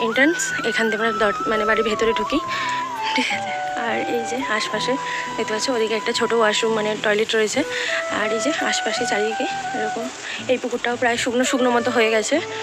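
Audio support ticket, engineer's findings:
Buzz at about 100 Hz, 1.19 s to 2.49 s. Level tracks the audio. Filter restarted on every block. State not carried across block boundaries. Each block starts from silence and leaves a small transient. Ticks repeat at 100 per second, heard as buzz.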